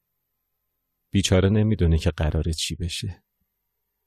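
Nothing stood out on listening to this speech recording.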